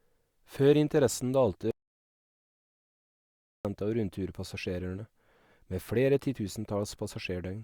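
The input feed to the recorder was likely lost for a moment, through a dropped link, disconnected device or accidental mute, while writing continued with silence, producing an audio dropout to silence in this speech clip. From 1.71 s to 3.65 s the sound cuts off mid-flow into silence, with no room tone at all, and resumes abruptly on "av rundturpassasjerene". Roughly 1.94 s of speech is simply missing.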